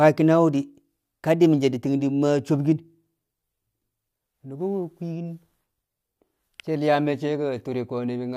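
There are no technical faults to describe anywhere in the speech.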